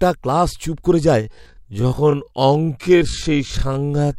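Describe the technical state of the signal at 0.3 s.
At 0.3 s the speech signal is intact, with no audible technical fault at that moment.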